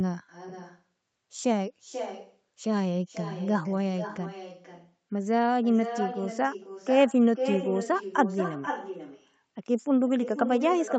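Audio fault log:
throughout: echo with no canceller. Every phrase of speech returns about half a second later as a second, weaker copy, roughly 10 dB below the original. The far end is playing the call through a loudspeaker. Its microphone picks that sound up again and sends it back, and nothing cancels it. The copy sounds thinner because it has passed through a speaker, a room and the call path, which also tops out at 8 kHz.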